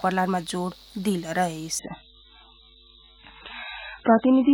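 At 1.79 s the audio switches abruptly to an adaptive stream at a lower bitrate and stays there to the end. The connection slowed, so the player fetched a much leaner encoding. The sound fits a step from around 128 kbit/s MP3 down to about 8 kbit/s. Nothing remains above 4 kHz, and the rest turns smeared and watery. Unlike a buffering stall, there is no gap or pause, only an instant drop in fidelity.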